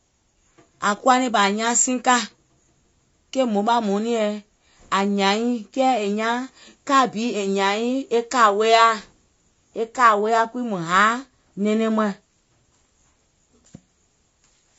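From start to finish the speech sounds rough and grainy, with hiss filling the gaps between harmonics and a dull, synthetic top end. That's likely low-delay AAC compression, AAC-ELD, at a rate that fits about 32 kbps, where its short frames smear pitch detail.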